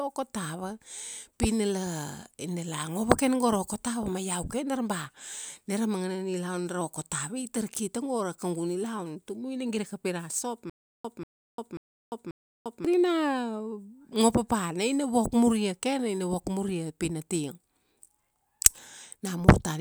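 Stutter with silent gaps from 10.70 to 12.85 s: a 189 ms burst of speech repeats four times on a steady 537 ms cycle, with 349 ms of digital silence between. The player likely stalled, replaying its last fragment at each retry, so the intervening speech is lost.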